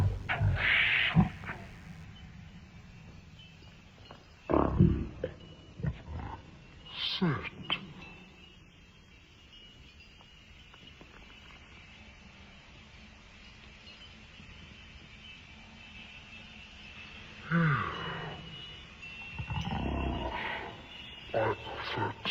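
A thin, steady buzz sits under the audio from the start until about 2.04 s, faint and well below the main sound, with a harsh, harmonic-rich edge at a 100 Hz fundamental. That is DECT cordless phone buzz. A nearby DECT handset or base station transmits a short radio burst every 10 ms, and something in the audio circuitry rectifies those bursts, turning the 100 Hz burst rate into an audible tone with many harmonics. At 4.77 s the sound lurches forward with no gap at all. Roughly 0.7 s of material is simply gone, and the audio on either side is butted together almost directly. This is a skip ahead. A stretch of audio was discarded, either lost in transit or dropped by an overflowing jitter buffer, while later audio was already queued, so playback jumped straight to it and shed that much delay. Right after, from 5.09 s to 6.58 s, the audio sounds hurried, running at about 120% speed while its pitch stays the same. 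That is a jitter buffer speed-up. The buffer was still holding more audio than its target, so the receiver repeatedly cut out short pieces of one or a few pitch periods, removing about 0.3 s in total to pull the delay back down.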